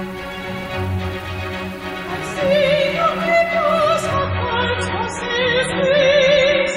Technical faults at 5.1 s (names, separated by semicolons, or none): adaptive stream at a lower bitrate